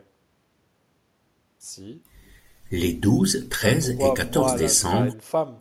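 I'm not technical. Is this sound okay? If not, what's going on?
Yes, this recording sounds fine, with no technical faults to be heard. There's nothing here that needs fixing.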